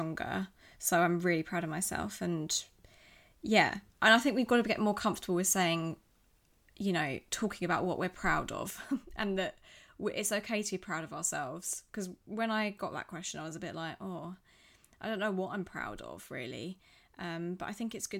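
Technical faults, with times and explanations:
8.7–18.2 s, one channel drops out: just after "about what we're proud" the speech steps down by about 6 dB and stays there, likely from one stereo channel being lost before the mono sum. The waveform halves in height at a sharp edge, and the spectrogram dims evenly across frequencies.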